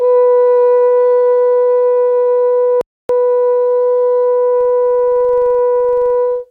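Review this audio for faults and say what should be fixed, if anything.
At 2.81 s the music drops to silence and picks up again at 3.09 s, exactly where it left off. This is a rebuffering stall: the player exhausted its downloaded audio and waited for more data before continuing. No material is lost, but about 0.28 s of dead air is inserted into the timeline. To prevent it, keep a larger playback buffer or use adaptive bitrate so delivery stays ahead of playback.

From 4.61 s to the end, a regular tick pattern rides on the music as a low buzz at 23.4 Hz, rising and falling with the signal level. This points to a filter restarted on every block: it discards its internal state at each block boundary and begins from silence, so every block opens with a small transient. The rate fits a 2048-sample block. To prevent it, carry the filter's state across block boundaries instead of reinitialising it.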